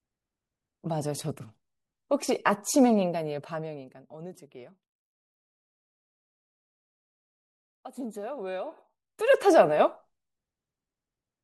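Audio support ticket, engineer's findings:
Zipper noise, 2.92–4.30 s (level falls roughly 20 dB) and 8.54–9.34 s (rises back): ticking at about 50 steps a second. Gain stage stepping per buffer without smoothing.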